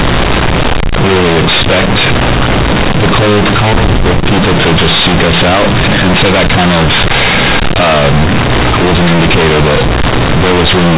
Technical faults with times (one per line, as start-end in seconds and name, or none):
0.00-10.98 companded audio read as linear